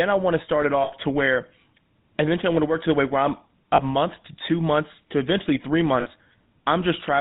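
A GSM full-rate codec encoded this speech throughout, and its damage is plainly audible. The codec rebuilds the voice from a vocal-tract model driven by sparse, regularly spaced pulses, and it passes nothing above 4 kHz, which fits the 13 kbps full-rate scheme. The result is a dull, band-limited voice with a constant buzzy, gravelly roughness. Lost GSM frames break the speech three times, and at each gap the decoder repeated the last good frame's settings, so the sound hangs as a brief rough, metallic ring rather than cutting out. The first gap runs from 0.84 to 0.93 s, about 80 ms after "want to start it" and before "to where". The second runs from 3.74 to 3.81 s, about 40 ms between "the way where I'm" and "month to two months". The third runs from 6.0 to 6.08 s, about 60 ms after "months to eventually three".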